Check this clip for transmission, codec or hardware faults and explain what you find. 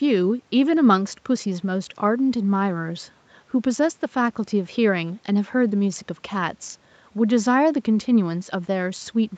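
No faults turn up in this speech: the signal shows only what a call path normally leaves behind, with the lowest bass trimmed by the microphone processing and nothing above 8 kHz, which fits a call codec running at that bandwidth.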